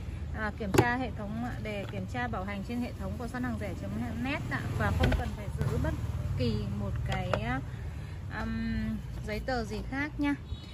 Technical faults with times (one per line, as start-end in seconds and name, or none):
5.20-5.61 one channel drops out